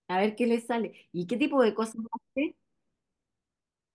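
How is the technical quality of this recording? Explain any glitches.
No technical faults are audible.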